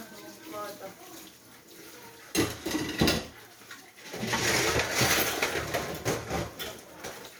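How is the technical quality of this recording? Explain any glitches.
The recording shows no technical faults. There are no glitches anywhere in the audio that need explaining.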